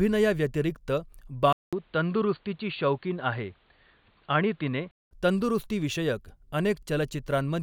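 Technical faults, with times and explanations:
1.53–5.11 s, input switched to a poorer device: after a 200 ms silence the speech turns boxy, with nothing above 4.5 kHz and new hiss around 40 dB down, then clears at 5.11 s. That gap and fresh noise floor, likely from another microphone, distinguish it from plain low-pass filtering.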